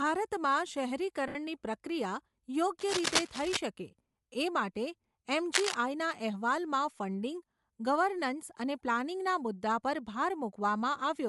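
Throughout the recording, the speech appears to have passed through Bluetooth LC3 compression at a modest bitrate, likely LC3 coding. Upper frequencies are thinned and refilled with noise, giving consonants and vowels a plainly audible breathy, grainy edge.

From 1.28 to 1.35 s, LE Audio frames were lost, a 70 ms gap that fits seven 10 ms LC3 frames. The decoder patched the hole by repeating the last spectrum with scrambled phase, so the speech briefly smears into a hissy, noisy blur.

From 2.79 to 3.58 s and again from 5.54 to 5.75 s comes cable scratch noise, likely a worn lead or connector shifting so its contact resistance jumps erratically. Each event lays dense, uneven crackling and rustling over the speech at roughly the same loudness as the talker.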